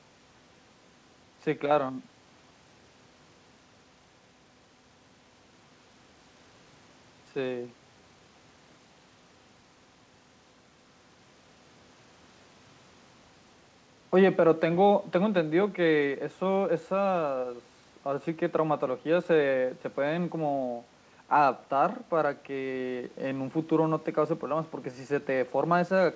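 No faults are audible in the speech, and the band stopping at 8 kHz fits a G.722 wideband call path running as expected.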